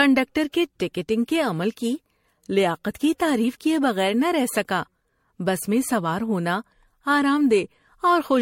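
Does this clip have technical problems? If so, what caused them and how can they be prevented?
Yes. Throughout the speech the sound is swirly and hollow, with a smeared, watery texture, softened consonant attacks, and nothing above 16.5 kHz. That is more damage than a single low-bitrate pass would leave, and it fits generation loss, likely from MP3 encoding at around 64 kbit/s repeated about five times. Each decode and re-encode lands on a shifted frame grid, so fresh quantisation noise and spectral gaps pile up with every pass. To prevent it, keep a lossless master and encode to MP3 only once, at the final step.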